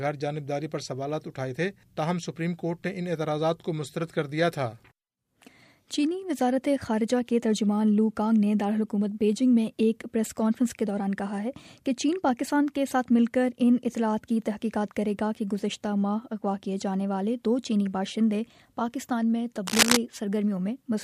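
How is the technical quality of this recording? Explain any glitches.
There's one real glitch, near the end. From 19.66 to 19.97 s you get cable scratch noise, a dense, ragged burst of scratching and rustling sitting a bit louder than the sound itself. It's likely a worn cable or connector being shifted, its contact resistance jumping around rapidly.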